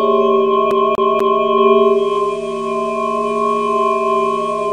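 From 0.71 to 1.44 s the sound is a CD stuck on one turn: a scratch keeps knocking the laser back a track, so a 243 ms slice plays three times with a brief mute at each jump. The waveform shows identical repeated blocks separated by tiny gaps.

At 1.72 s the digital radio starts blending to analogue FM over 425 ms and stays there to the end. The level drops by about 4 dB, and hiss rises to roughly 30 dB under the signal.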